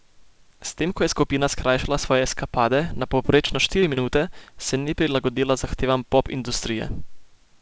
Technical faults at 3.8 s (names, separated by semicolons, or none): repeated packet loss (robotic sound)